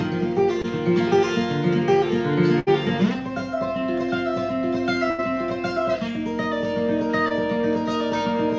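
At 0.62 to 0.66 s there is a brief smear, a tiny wobble where the sound seems to stutter for an instant before carrying on. This is short concealed packet loss: about 20 ms of audio never arrived at the decoder in time, so the receiver extended the preceding sound for about 16 ms, imitating its pitch or its noisy texture, then crossfaded back into the real signal. Across the whole clip nothing is heard above 8 kHz, which fits a wideband call codec.

From 2.60 to 2.69 s the sound freezes into a held, buzzy or hissy tail that fades, and then picks up further along as if a sliver had been snipped out. That is a burst of packet loss: several packets in a row went missing, so about 70 ms was filled by continuing and attenuating the last sound, and about 60 ms of the original is simply gone. The same thing happens again at 5.11 to 5.20 s, slightly longer, with about 78 ms of faded continuation standing in and about 80 ms of the original lost.

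At 7.28 to 7.32 s there is another quick smear, a second short concealed packet loss, where about 20 ms of audio was lost and an equally short synthetic continuation bridged the gap before the real signal resumed.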